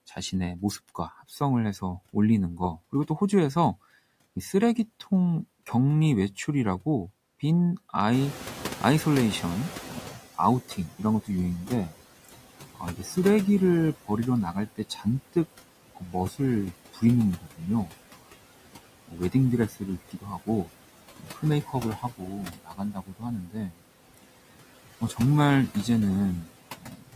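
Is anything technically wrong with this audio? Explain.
Yes. The speech carries three related noise-suppression faults.

Noise suppressor artifacts run through the whole clip. The suppressor pulls down bands it judges to be steady noise by about 17 dB frame by frame, so the background sinks in pauses and resurfaces under speech. The pumping follows the speech rhythm, which sets it apart from ordinary room noise.

The noise suppressor catching up occurs from 8.12 to 10.23 s. Room noise jumps by about 16 dB at roughly 8 s, and the noise estimate needs about 2.1 s to adapt. The louder background therefore passes through with less reduction at first, then sinks gradually by about 14 dB. That slow fade after a sudden rise distinguishes it from the constant frame-by-frame pumping.

Speech cut by the noise suppressor occurs at 10.12–13.17, 14.04–15.36, 15.95–16.4, 16.93–17.92, 19.08–24.25, 25.01–25.75 and 26.44–27.15 s. 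The suppressor mistakes parts of the speech for noise and dips them by about 11 to 19 dB, deepest in the 19.08–24.25 s stretch, where roughly one and a half seconds in total is affected. The affected parts sound swallowed or faint. Unlike the residual noise, the speech itself loses level here.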